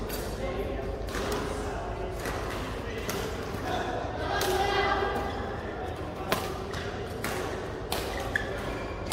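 Listening through the recording, nothing stood out as a technical problem at any point.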